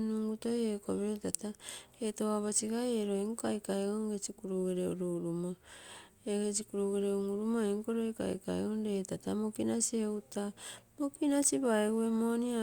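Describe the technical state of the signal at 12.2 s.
At 12.2 s the speech signal is intact, with no audible fault at that point.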